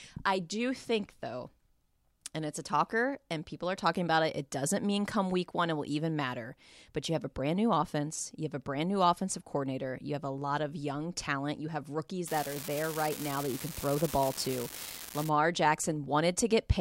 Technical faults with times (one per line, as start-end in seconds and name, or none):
12.28-15.29 unreliable data bit